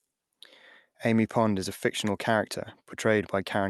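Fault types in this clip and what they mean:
No faults can be heard in this speech recording.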